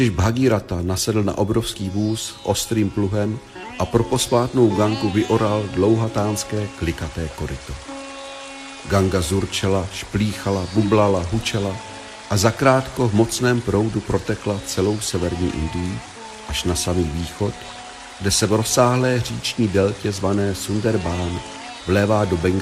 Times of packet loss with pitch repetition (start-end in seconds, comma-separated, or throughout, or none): none